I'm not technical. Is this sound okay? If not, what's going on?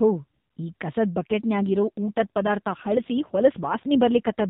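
No. From about 1.21 s until 4.48 s, the voice turns rougher and more synthetic, a bit buzzy and robotic. This is an AMR rate drop. The call runs through a mobile phone codec, which already sounds thin and muffled. When the radio link weakens, the network tells that codec to use fewer bits for the voice and more for error protection. There is no gap, and the voice doesn't get more muffled. It just loses detail and sounds more artificial.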